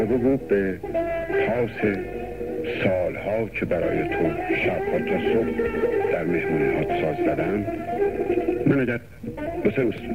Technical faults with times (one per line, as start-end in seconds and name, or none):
7.96-10.14 time-stretched section